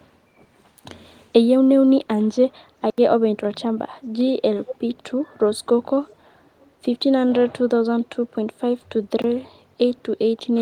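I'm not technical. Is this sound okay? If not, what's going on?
No, there are two kinds of problems.

Block of digital silence: at 2.9 to 2.98 s the sound drops out completely for 80 ms, and again at 9.22 to 9.24 s for 20 ms. In both spots a chunk of the audio was replaced with silence. The sound stops and restarts instantly with no fade. The first gap is long enough to be a short hole. The second is closer to a tick.

Echo leak: a faint, delayed copy of the speech comes back at 4.66 to 4.76 s, then much more faintly at 6.07 to 6.16 s and 6.45 to 6.71 s. Each copy lags the original by 448 ms, roughly half a second. This is likely one side of the call playing through a loudspeaker while its echo cancelling failed to remove everything its microphone picked up, so some of that sound was sent back.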